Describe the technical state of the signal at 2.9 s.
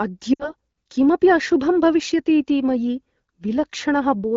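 At 2.9 s the speech is intact, with no fault, and it carries only the light, clean character of AMR wideband (HD Voice) coding at a rate that fits around 12.65 kbit/s.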